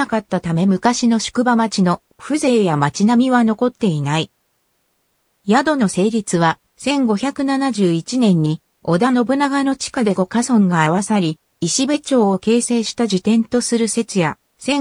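Nothing audible to flag anywhere in the recording.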